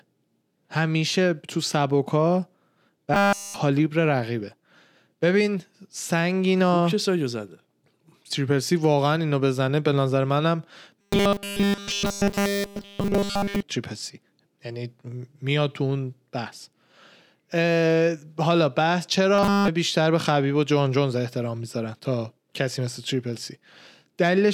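Speech with robotic sound from repeated short buffers at 3.14 to 3.56 s, 11.01 to 13.62 s and 19.35 to 19.68 s. The voice becomes a rigid metallic buzz at 200 Hz. This is likely a starved stream looping its last 5 ms, so nearly all real audio is skipped.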